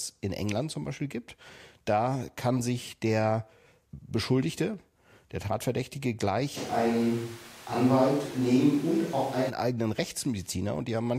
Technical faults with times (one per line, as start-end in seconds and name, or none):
6.58-9.48 switch to a distant microphone